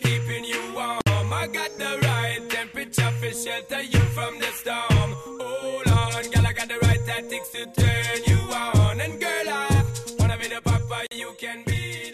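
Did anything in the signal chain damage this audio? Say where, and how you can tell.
Yes. At the codec stage, pieces encoded separately were joined untrimmed, leaving a gap at a join of encoded pieces: encoder delay and last-frame padding survive as silence. The sound drops out at 1.01–1.07 s and 11.07–11.11 s, ten seconds apart, with smeared edges, then resumes.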